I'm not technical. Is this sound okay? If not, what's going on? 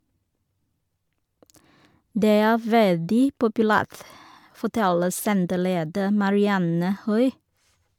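No. Throughout the speech there is a swirly, hollow, smeared quality, and the starts of sounds are blurred. This is generation loss, likely from the audio being saved in MP3 form around seven times over, each save adding fresh damage.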